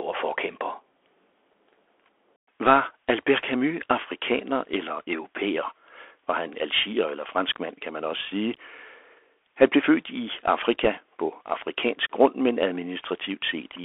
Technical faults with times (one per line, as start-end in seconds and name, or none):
0.00-13.85 Bluetooth CVSD headset codec
10.84-10.87 bit errors on a Bluetooth voice link